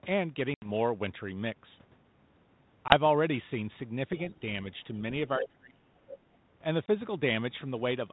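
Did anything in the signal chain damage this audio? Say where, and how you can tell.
Yes. Network stage: packet loss on an ADPCM call at 0.54–0.69 s (80 ms lost), 2.88–2.94 s and 6.86–6.88 s. Each shows as a flat, hard-edged waveform gap, then slightly distorted speech while the decoder's predictor re-syncs.

Call processing: speech suppressed in double talk from 5.38 to 5.96 s, dipping by about 25 dB over roughly half a second. The spectrogram thins and fades in patches, likely the echo canceller ducking both talkers.

Call processing: the other side's voice leaking through at 5.4–5.49 s (about 5 dB below the talker) and 5.97–6.18 s (about 15 dB below). These show as second harmonic stacks, likely uncancelled loudspeaker echo.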